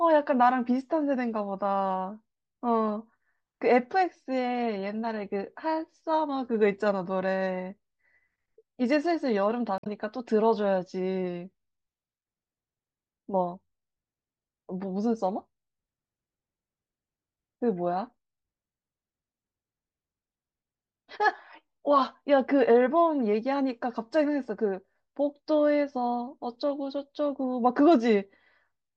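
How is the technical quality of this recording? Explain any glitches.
There is one glitch in the recording, a short burst of damaged data in the compressed stream from 9.76 to 9.87 s. For about 0.11 s the encoded stream holds bytes that are lost, zeroed or overwritten. The decoder misreads or rejects those frames, loses synchronisation and searches for the next valid frame header before normal playback resumes. The result is a brief chirp, squawk, click or short hole cutting across the speech at that point.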